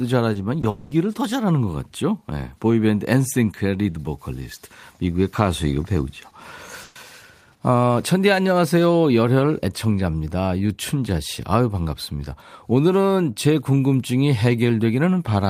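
Short concealed packet loss occurs at 0.33 to 0.37 s and again at 0.61 to 0.65 s. Each time about 20 ms of speech failed to arrive, and the receiver papered over it by extending the preceding sound, leaving a brief smear or wobble.

From 0.69 to 0.93 s, a stretch of about 220 ms is replaced by a synthetic continuation of the previous sound, heard as a buzzy or hissy fill that fades and never drops to silence. The likely cause is a long network dropout. Speech resumes afterward with that portion missing.

A burst of packet loss hits at 6.83 to 6.97 s, where about 120 ms of consecutive audio was lost or arrived too late. The receiver held the last sound and let it fade, so a buzz or hiss sits where the audio should be.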